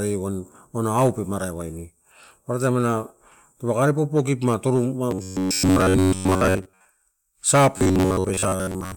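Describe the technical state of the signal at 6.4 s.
At 6.4 s the speech carries robotic sound from repeated short buffers, spanning 5.11 to 6.85 s. A fixed 93.8 Hz buzz is imposed on the speech, most likely because audio arrived too seldom and each roughly 10.7 ms fragment was replayed while real audio was skipped. On a spectrogram this appears as flat, evenly spaced harmonic lines, and the waveform repeats near-identical cycles.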